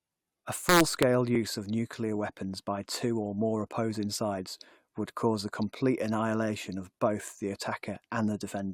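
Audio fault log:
0.69–1.03 s integer overflow: speech peaks about 2 dB over full scale wrap to the opposite sign, giving sharp cracks; waveform shows sudden sign-flipping jumps, spectrogram broadband vertical streaks.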